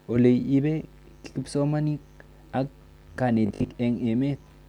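From 3.46 to 3.78 s the speech turns into a rigid, metallic buzz at 50 Hz: robotic sound from repeated short buffers, likely from audio arriving too seldom, so a 20 ms chunk is looped for about half the span. A spectrogram shows evenly spaced 50 Hz harmonic bands, and the waveform shows identical repeating cycles.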